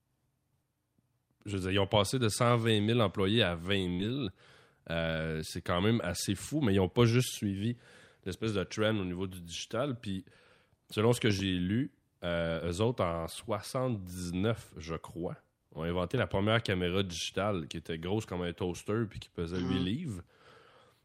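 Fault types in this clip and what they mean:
Burst of packet loss: At 3.93 to 4.07 s the receiver filled a 57 ms gap by holding the last sound and letting it fade, skipping about 60 ms of audio. On a spectrogram this shows as frozen, smeared frames that fade, then an abrupt jump forward.
Loud pop: A voltage step or pulse, likely from a plug, switch, static or a driver glitch, added at 11.30 s (two pops, just before "lu eux autres en") and 16.18 s (one pop), peaking about 10 and 5 dB above the signal. Narrow waveform spikes, vertical broadband lines on a spectrogram.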